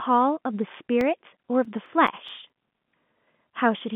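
A speech clip carried over a telephone-band line, marked by CD scratch ticks: ten short clicks from 1.01 s to 2.92 s, about five per second, the longest lasting about 5 ms. A scratch spoils data once per disc revolution, and the player conceals it. On a waveform they show as regularly spaced notches or spikes, and on a spectrogram as thin vertical lines, all confined below about 3.7 kHz.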